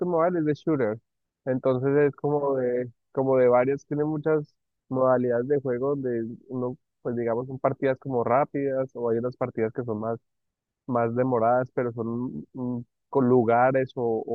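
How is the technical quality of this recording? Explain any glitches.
No glitches can be heard anywhere in the recording; the signal stays continuous and steady throughout, with nothing breaking into the speech.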